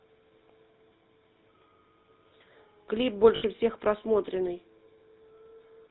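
Speech coded with the GSM full-rate codec, which fits its 13 kbps rate: the codec passes nothing above 4 kHz, and its regular-pulse excitation leaves a plainly audible buzzy, gravelly roughness throughout. Lost GSM frames from 3.36 to 3.43 s, a 60 ms gap consistent with three dropped frames, were concealed by repeating the last good frame, producing a brief rough, metallic ring.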